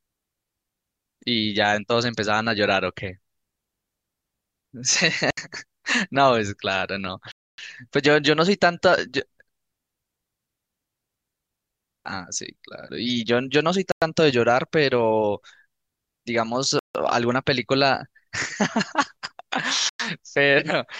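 At 5.31 to 5.37 s the speech drops into a digital wireless dropout: the receiver lost too much data and muted for about 70 ms, leaving a clean hole of near silence with a very short fade and no noise burst on either side.

Four further gaps, at 7.32 to 7.58 s (265 ms), 13.92 to 14.02 s (101 ms), 16.79 to 16.95 s (157 ms) and 19.89 to 20.00 s (103 ms), are likely Bluetooth stalls. Playback cuts to silence, then resumes, consistent with a playback buffer running dry while delayed packets were resent.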